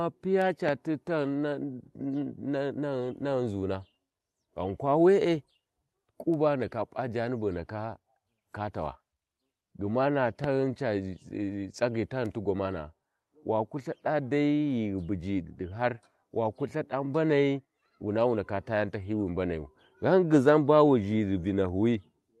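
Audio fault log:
0.69–0.71 s and 10.44–10.46 s, loud pop: single sharp pulse about 10 dB above the speech, likely an electrical voltage step; waveform spike, thin broadband vertical spectrogram stripe.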